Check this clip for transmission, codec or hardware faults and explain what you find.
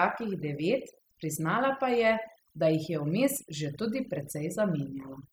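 One fault runs through the whole speech clip: overdone noise removal. Noise reduction set too strong mutes bands near its noise estimate, leaving twinkling specks in near-silence.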